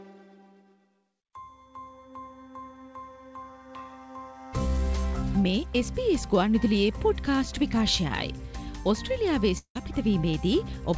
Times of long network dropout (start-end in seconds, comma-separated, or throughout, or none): 9.58-9.77